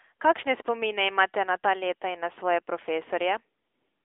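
The speech has been squeezed through the AMR narrowband mobile codec for its whole length, with a line band of roughly 300 Hz to 3.5 kHz and nothing above 3.6 kHz. The plainly audible buzzy, synthetic coloration fits the 10.2 kbps AMR-NB mode.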